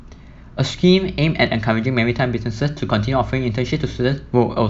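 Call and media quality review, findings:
No technical faults found in the signal path; the speech signal shows no detectable defects.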